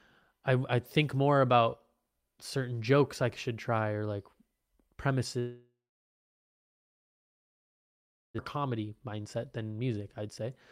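A long network dropout runs from 5.39 s to 8.40 s. The speech stops mid-flow. The receiver stretches the last sound into a brief fading buzz or hiss, and then about 2.6 s of near silence follows. This is most likely a stall in packet delivery. When the speech resumes, about 1.6 s of it has simply gone, and the stream now runs roughly a second and a half behind where it was.

A jitter buffer speed-up follows from 8.56 s to 10.48 s. A backlog of audio built up in the buffer. To work it off, the receiver repeatedly cuts out tiny slivers of a pitch period or so. The speech plays at about 113 percent of normal speed with its pitch unchanged, so it sounds hurried. Around a third of a second is trimmed away in total.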